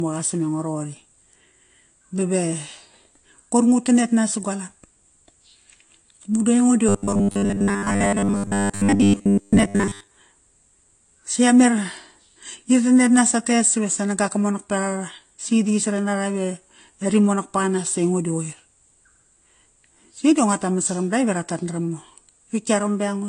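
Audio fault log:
throughout: transcoding between lossy codecs. Dull sound with a band limit and layered artefacts, likely from an AAC-style encode re-encoded to Vorbis.
6.89–10.10 s: robotic sound from repeated short buffers. Metallic 100 Hz buzz that only loosely tracks speech, likely from one 10 ms buffer repeated in place of most real audio.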